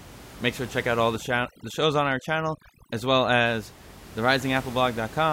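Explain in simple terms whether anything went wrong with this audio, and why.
From 1.16 to 3.46 s the gaps drop and break up into twinkling specks instead of the steady room noise. That is overdone noise removal: a filter set too strong switched off quiet parts of the voice along with the noise.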